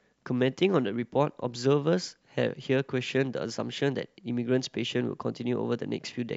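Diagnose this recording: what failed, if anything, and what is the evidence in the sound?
Nothing failed in this recording, and the sound gives no evidence of any fault.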